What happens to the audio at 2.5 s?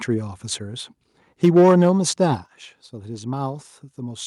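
At 2.46 s the speech and the background drop together by about 7 dB in a single step. This is a microphone volume stepped down. The call software likely judged the input too loud and cut the device's input volume at once.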